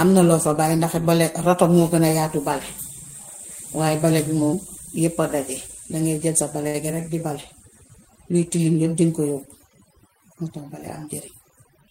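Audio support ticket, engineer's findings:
Noise suppression set far too aggressively, whole clip: bands near the noise estimate gated out with quiet speech detail, leaving lowered background breaking up into twinkling specks.

Short stall from a late packet, 6.67–6.76 s: jitter buffer underran, last sound stretched about 67 ms until the packet arrived; nothing lost, one sound held too long, delay up 67 ms.

Jitter buffer speed-up, 11.06–11.88 s: receiver trimming backlog by cutting pitch-period slices, roughly 70 ms removed; speech runs at 108% speed at unchanged pitch and sounds hurried.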